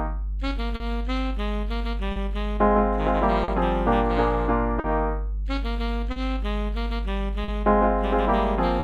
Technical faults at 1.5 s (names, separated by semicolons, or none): mains hum; clock drift between sender and receiver